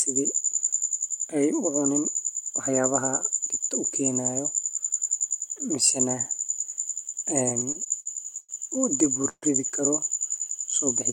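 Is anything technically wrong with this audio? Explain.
Yes. Repeated stalls (stutter) occur from 7.49 to 8.51 s and again from 9.05 to 9.44 s. Packets arrived too slowly, so the jitter buffer kept running dry and the last sound was stretched to fill the waits, about 212 ms and 156 ms in total. Nothing is lost, but the speech drags and hiccups, with gaps up to 133 ms.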